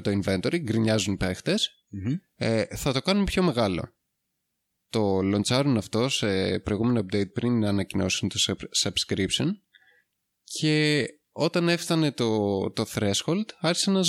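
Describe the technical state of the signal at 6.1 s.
At 6.1 s the speech signal is intact, with no fault present at that moment.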